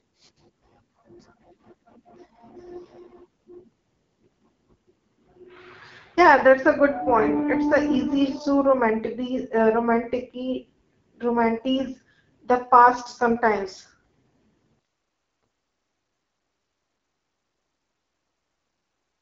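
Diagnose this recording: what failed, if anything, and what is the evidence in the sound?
Codec stage: rough, raspy AMR wideband (HD Voice) speech throughout, nothing above 7.5 kHz, pointing to a low AMR-WB mode around 8.85 kbit/s.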